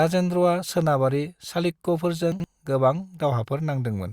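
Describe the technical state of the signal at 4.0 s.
At 4.0 s the signal is intact, with no audible fault at that point.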